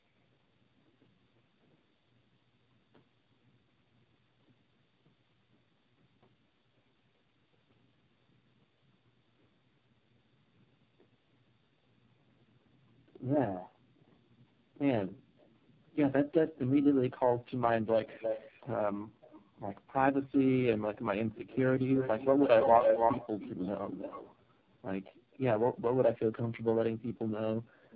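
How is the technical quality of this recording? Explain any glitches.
The speech has two faults: tandem speech coding throughout, and three brief drops of the background gated by the echo canceller.

Tandem speech coding runs the whole clip. The speech was decoded and re-encoded through about three narrowband speech coders in succession. Each pass compounds the last, leaving the sound rough, muffled and warbly, with nothing above 3.6 kHz.

The background gated by the echo canceller occurs at 19.07–19.22 s, 25.18–25.31 s and 27.61–27.74 s. During far-end playback the canceller clamped the microphone, so the room sound falls away by about 37, 37 and 40 dB for a fraction of a second before returning.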